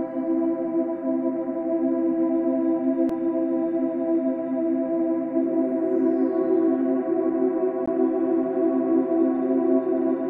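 At 3.09 s and again at 7.86 s there is a CD skip. The laser is thrown to another turn of the disc's spiral, so the player mutes briefly and resumes from a different point. Each is heard as a small tick followed by an abrupt jump in the sound. On the waveform there is a near-flat gap of a few milliseconds at 3.09 s and about 15 ms at 7.86 s, with a mismatched join. The spectrogram shows a thin vertical broadband line at each event.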